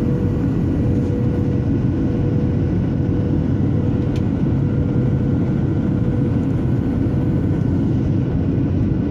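No technical faults can be heard anywhere in the audio; the signal stays stable and continuous, with no disturbances in level, timing or tone.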